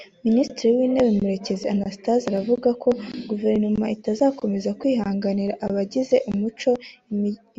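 Two sharp clicks cut into the speech, at 2.38 s and again at 6.75 s just after "itazakomeza kwihanganira abagize". Each is most likely dropped samples: a tiny fraction of a millisecond goes missing, so the waveform jumps abruptly and snaps into a single tick.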